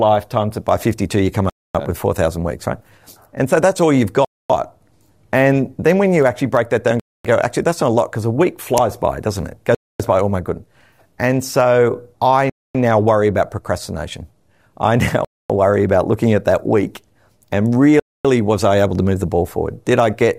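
Gaps between chunks, each 250 ms of silence, at 1.50, 4.25, 7.00, 9.75, 12.50, 15.25 and 18.00 s. The audio arrives in 2.5 s chunks with a hole at each join. Unlike dropouts, no sound is lost: after "actually break that down", speech resumes intact with "go actually that's not".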